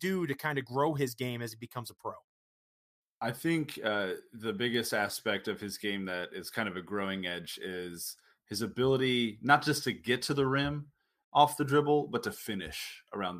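At 4.74 s, between "I think uh the" and "aspect of his game", there is a single bit error spike. One bit in one sample was flipped, either in memory or on a digital link. That sample's value jumped by a power of two and then snapped straight back. The spike reaches about -24 dBFS. It sounds like one sharp, brief tick. Its energy is spread across the whole spectrum and has nothing to do with the speech around it.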